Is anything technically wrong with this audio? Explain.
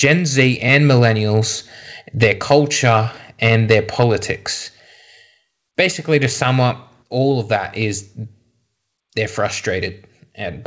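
Yes. From 3.45 to 4.03 s the loudest syllables carry a harsh, crackling edge: microphone overload, most likely from an input volume set too high. Peaks ran about 4 dB past the converter's ceiling and had their tops sliced flat, affecting around one percent of samples. The distortion is a buzzy grit locked to each peak and gone between them. That separates it from codec noise, which sits evenly across the sound within a band that stops at 8 kHz.

At 4.03 s, right where the overload ends, the microphone volume steps down by about 2 dB. It steps down again at 7.56 s, this time by about 4 dB. Each drop is likely the call software lowering the device input after finding the microphone too loud or clipping. The sound and its background fall together, instantly, and then hold steady. A limiter or compressor would dip only on loud peaks and recover, but these steps never come back up.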